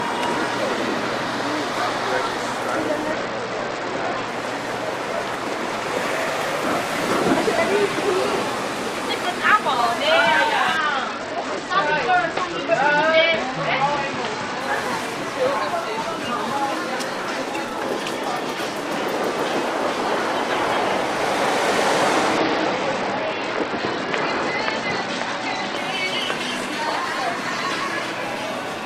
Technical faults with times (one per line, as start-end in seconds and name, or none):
3.12-4.28 Bluetooth SBC bit pool drop
10.77-14.60 Bluetooth SBC bit pool drop
22.38-25.77 Bluetooth SBC bit pool drop